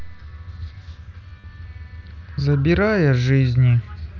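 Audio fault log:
1.41–1.44 s, concealed Bluetooth headset packet loss: About 30 ms of audio never arrived, which fits a short run of dropped headset packets. The receiver filled the hole by repeating a recent stretch of waveform. This gives a brief buzzy hold at full level, then a slight warble as the mSBC wideband audio resumes.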